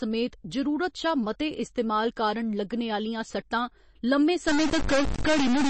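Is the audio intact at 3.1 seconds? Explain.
No. At 3.1 seconds the speech carries MP3 compression damage, and it runs through the whole clip. Nothing is heard above about 8.3 kHz. The encoder was short of bits, so it cut the treble at a fixed point and dropped weak frequency lines. Those lines flicker on and off between frames. The result sounds watery and swirly, with smeared attacks. The damage is plainly audible. It is likely an MP3 at a very low rate, around 32 kbps.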